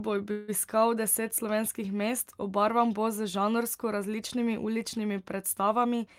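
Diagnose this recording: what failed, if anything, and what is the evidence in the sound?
The first failure is at the network and jitter-buffer stage. From 0.31 to 0.50 s the speech stops moving forward. In its place, the last sound is stretched into a fading buzz or hiss for about 168 ms. It never drops to silence. When the speech resumes, it carries on from exactly where it halted, so nothing is lost. The rest of the clip up to the speed-up now sits 168 ms later. This is a call audio freeze, likely caused by packets stalling in transit until the buffer ran dry.

The second failure is a jitter buffer speed-up, also in the receive buffer. From 5.84 to 6.07 s the speech runs at about 120 percent speed, while its pitch stays the same. It sounds rushed over that stretch. The receiver had more audio queued than it wanted, as happens after delayed packets arrive together. To shed it, the receiver cut many small pitch-period slices in quick succession, removing roughly 50 ms in total.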